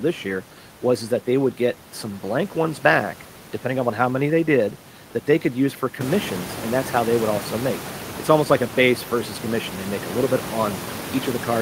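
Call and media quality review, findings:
No faults found; room noise rises near 6 s.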